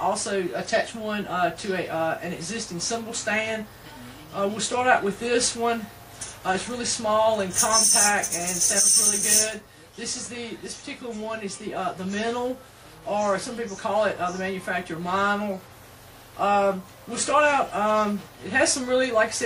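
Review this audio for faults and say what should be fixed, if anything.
No faults can be heard anywhere in the audio, so nothing needs fixing. It can be kept as it stands.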